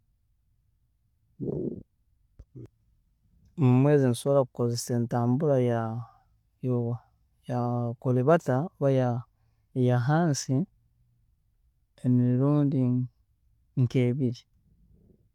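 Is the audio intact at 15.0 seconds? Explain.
Yes, the audio is intact at 15.0 seconds, with no fault audible at that moment.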